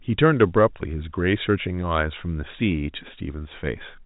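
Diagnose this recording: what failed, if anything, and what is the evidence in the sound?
Nothing stood out on listening to this speech recording, which carries the narrow telephone band of G.711 coding with no content above 3.8 kHz, as that path is meant to sound.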